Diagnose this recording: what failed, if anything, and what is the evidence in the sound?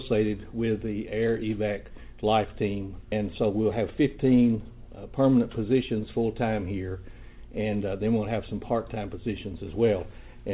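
At 3.12 s the skip ahead is a network or jitter-buffer fault. Roughly 400 ms of audio is gone, and the two sides are spliced within about 10 ms. Unlike a dropout or concealment, there is no silence or synthetic fill, only an abrupt jump forward.

From 3.81 to 4.19 s the jitter buffer speed-up comes from the receiver's buffer stage. The sound runs at 110% and sounds hurried, because around 40 ms was removed in pitch-period-sized pieces to drain excess delay. Pitch stays unchanged, which rules out a resampling or clock-rate error. Throughout, the G.711 A-law call path cuts everything above 4 kHz.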